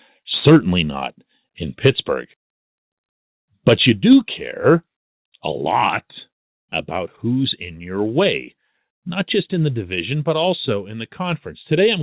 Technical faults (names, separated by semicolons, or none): microphone overload; microphone volume stepped down